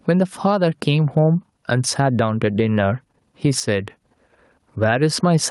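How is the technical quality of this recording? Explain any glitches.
The recording suffers from gain pumping throughout: the level ducks by around 10 dB under each loud syllable, likely from excessive input gain feeding a fast limiter.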